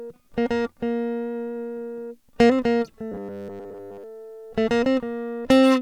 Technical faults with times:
3.12-4.04 robotic sound from repeated short buffers

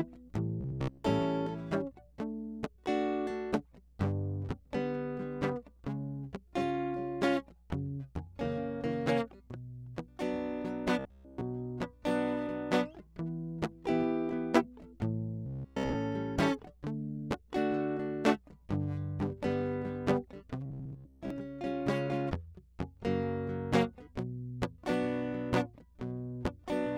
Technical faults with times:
0.61-1.04 robotic sound from repeated short buffers
10.99-11.43 robotic sound from repeated short buffers
15.46-15.96 robotic sound from repeated short buffers
20.66-21.30 robotic sound from repeated short buffers

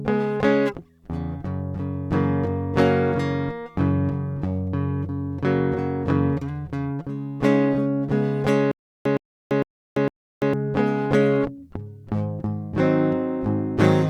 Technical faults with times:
8.71-10.53 stutter with silent gaps

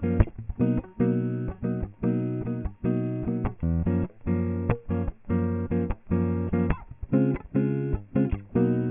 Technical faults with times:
0.00-8.90 aliasing

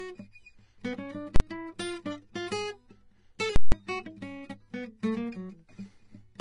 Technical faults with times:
0.00-6.41 low-bitrate audio saved at a high bitrate
1.36-1.40 invalid numbers at full scale
3.56-3.72 invalid numbers at full scale

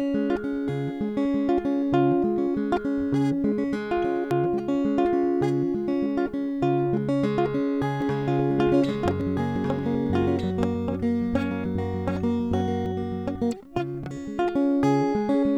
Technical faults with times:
4.31 audio missing between chunks
8.02-12.86 doubled audio track
9.21 audio missing between chunks
14.11 audio missing between chunks

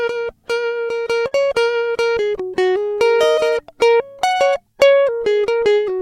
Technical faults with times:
1.27-1.49 short stall from a late packet

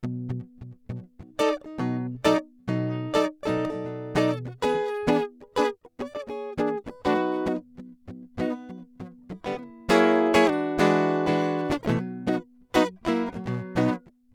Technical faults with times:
none

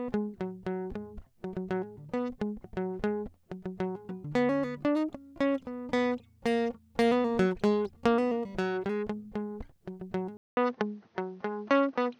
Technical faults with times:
10.37-12.20 input switched to a poorer device

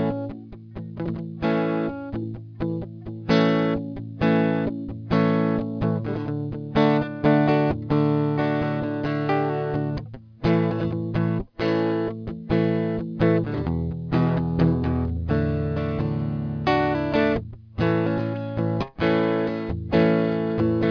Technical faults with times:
0.00-20.90 aliasing

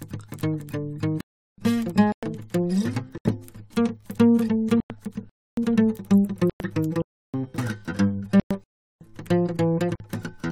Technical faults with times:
1.21-1.58 block of digital silence
2.12-2.23 Bluetooth stall
3.18-3.25 block of digital silence
4.80-4.90 Bluetooth stall
5.29-5.57 block of digital silence
6.50-6.60 Bluetooth stall
7.02-7.34 block of digital silence
8.40-8.51 Bluetooth stall
8.64-9.01 block of digital silence
9.95-10.00 Bluetooth stall

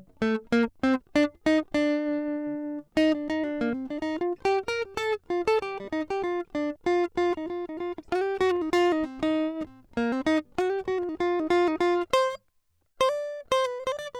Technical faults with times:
none

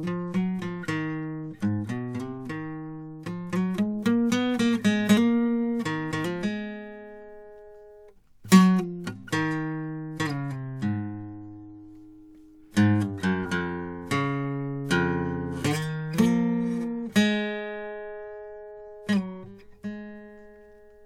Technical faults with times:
none

